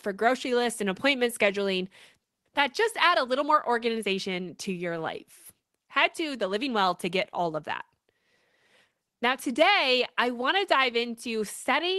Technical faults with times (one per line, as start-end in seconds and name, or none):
none